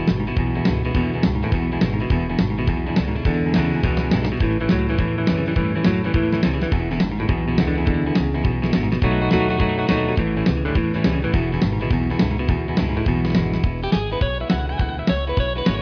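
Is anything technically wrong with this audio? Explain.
No, nothing here stands out as a technical problem, so you can relax about this one.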